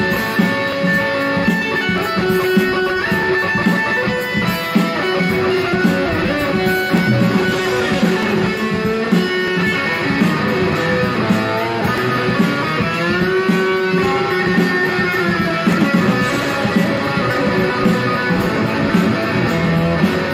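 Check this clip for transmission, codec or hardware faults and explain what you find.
A regular series of clicks runs from 0.72 s to 19.48 s, about fifteen in all, spaced every 1.25 s, consistent with clock drift buffer slips. The likely cause is two devices running on separate clocks that differ by roughly 500 ppm, so the buffer between them drifts until a short block, a few dozen samples, is dropped or repeated. Packet loss or random dropouts would produce irregular clicks, but these arrive at a steady rate.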